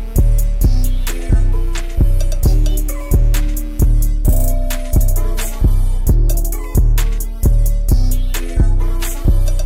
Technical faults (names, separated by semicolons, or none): mains buzz